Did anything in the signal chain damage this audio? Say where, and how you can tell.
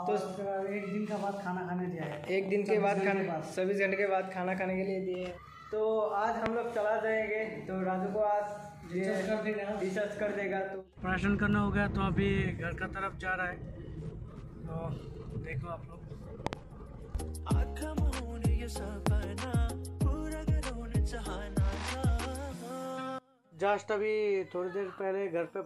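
Yes. Loud pops occur from 6.46 to 6.48 s, as a double pop from 16.47 to 16.55 s, and from 19.07 to 19.09 s, each peaking roughly 20 dB above the surrounding signal. The sound carries on underneath each pop rather than breaking, so the problem is a pulse added on top, not lost samples. That points to the analogue wiring stage, likely a voltage step from a connector, switch or static discharge that the following circuitry shaped into a short thump.

Periodic USB or driver dropouts run from 9.53 to 15.53 s, spaced exactly 1.0 s apart, about seven in all. Each is a regular tick that sounds only while signal is present. A tiny sliver of audio, a fraction of a millisecond, is skipped rather than replaced with silence each time. The strict one-second spacing indicates the driver or buffer stage, where a recurring background task stalls the audio stream on a fixed schedule.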